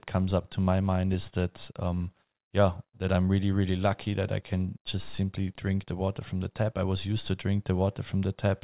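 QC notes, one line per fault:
No faults found in this speech recording.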